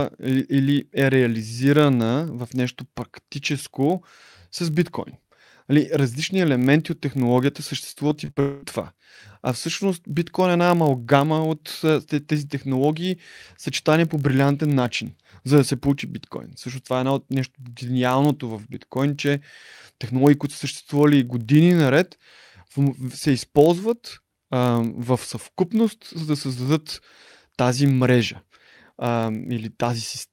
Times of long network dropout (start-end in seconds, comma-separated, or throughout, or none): 8.40-8.64